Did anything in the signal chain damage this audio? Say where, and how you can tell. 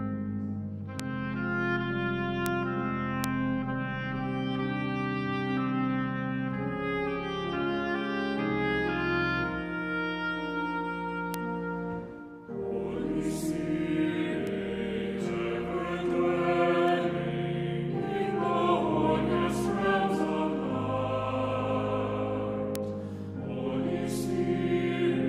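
Yes. Seven bit error spikes, one- to three-sample jumps from a flipped bit in memory or on a digital link, sit at 1.0, 2.46, 3.24, 11.34, 14.47, 16.88 and 22.76 s. Each is one sharp tick unrelated to the surrounding sound, peaking at about -6 dBFS, about -12 dBFS at 1.0 s and about -24 dBFS at 14.47 and 16.88 s. On a waveform each is a lone needle; a spectrogram shows a thin full-band vertical line.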